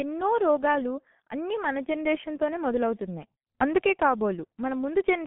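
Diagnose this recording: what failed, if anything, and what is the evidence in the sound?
The fault sits in the codec stage, throughout the speech. It shows the G.723.1 codec: muffled, hoarse speech and smeared consonants. The band runs from 150 Hz to 3.4 kHz. Heavy damage from its slow, coarse voice model fits a bitrate near 6 kbit/s.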